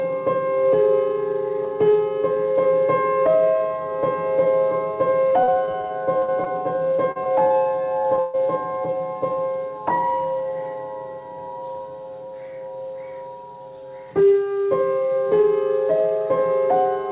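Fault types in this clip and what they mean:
Repeated packet loss (robotic sound): Between about 5.3 and 6.47 s, packets keep dropping out, ten gaps with the longest 41 ms. Each hole gets patched by extending the last sound, so about a fifth of that stretch is filled in and it comes out choppy with pieces missing.
Short concealed packet loss: Five quick dropouts of 20 to 40 ms, at 7.11, 7.23, 7.47, 8.02 and 8.16 s. The receiver carries the last bit of sound through each gap and blends back in, so you hear small smears or wobbles rather than holes.
Burst of packet loss: Right after that last short one, from 8.19 to 8.35 s, 140 ms goes missing in one run. Concealment holds the previous sound and fades it down, giving a held buzz or fading hiss, then the audio resumes with that chunk gone.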